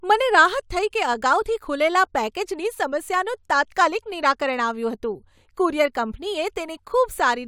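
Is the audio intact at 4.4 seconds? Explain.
Yes, the speech at 4.4 seconds plays through intact, with no dropout, click, distortion or other fault at that moment.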